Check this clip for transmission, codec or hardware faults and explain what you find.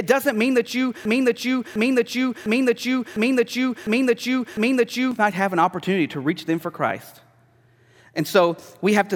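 One fault is present: a broken-record loop from 1.05 s to 5.11 s. A 0.7 s fragment of speech repeats six times, back to back and identical each time, and the speech that belonged in those four seconds never arrives. This is likely a stalled player or stream that kept resending the last chunk it held. Unlike packet-loss stutter, which repeats only a few milliseconds, this repeating fragment is long enough to be heard as a repeating piece of speech.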